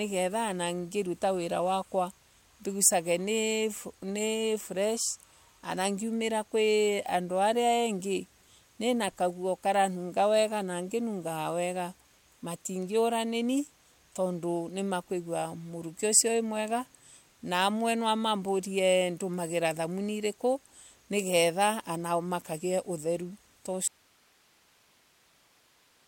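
At 23.88 s the speech cuts out abruptly in an audio dropout to a faint residue: only hiss, about 35 dB down, remains to the end. The feed was likely lost with the path still live; waveform and spectrogram collapse to a thin noise floor.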